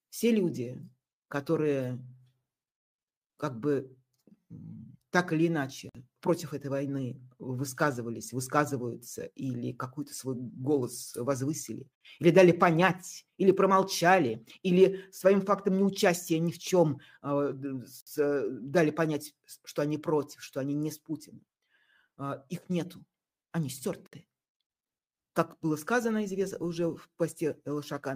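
The audio was encoded in separate pieces about 6 seconds long and joined without trimming, so each piece keeps its encoder start-up delay and padded final frame: a gap at a join of encoded pieces. Continuous sound drops to silence at 5.89–5.95 s (about 54 ms), then at 11.95–12.01 s, 18.01–18.07 s and 24.07–24.13 s (about 60 ms each). Each gap has smeared edges, and the sound resumes exactly where it stopped.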